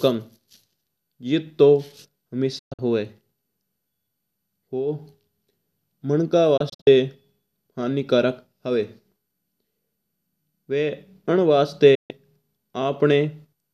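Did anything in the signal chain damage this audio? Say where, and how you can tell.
Yes. Digital broadcast dropout at 2.59–2.79 s, 6.57–6.87 s and 11.95–12.11 s. Each cut fades within 8 ms. The first two break into several holes. The receiver dropped bad frames and muted.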